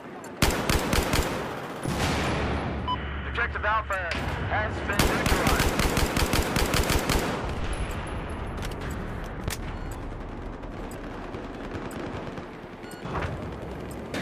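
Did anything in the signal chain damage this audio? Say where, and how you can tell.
Yes: a voltage pulse, likely from the analogue wiring, adds one loud pop at 9.48–9.50 s, about 15 dB above the sound, which continues underneath.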